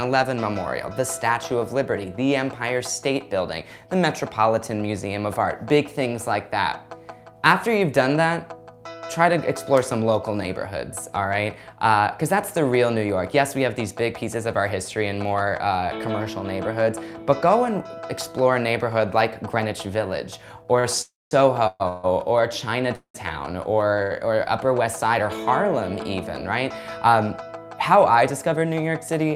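Repeated stalls (stutter) run from 20.63 to 24.13 s: seven gaps, the longest 190 ms, add about 0.6 s of filled-in sound, roughly 18% of that stretch. Packets kept arriving late, so the jitter buffer repeatedly ran dry and the receiver stretched the last sound until playback could resume, leaving the audio dragging and halting.

A call audio freeze sits inside that stretch, from 21.01 to 21.33 s. The last sound is held as a fading buzz or hiss that drops into about 200 ms of silence, a gap of roughly 0.3 s, after which the audio picks up where it left off. The likely cause is packets held up in transit, emptying the buffer for that moment.

A jitter buffer speed-up follows at 27.06 to 27.49 s, where the audio plays at about 110% speed with unchanged pitch. The buffer had built up surplus delay, so the receiver trimmed short pitch-period pieces, around 50 ms in total, making this passage sound briefly hurried.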